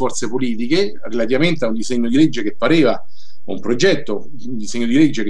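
No technical faults are audible.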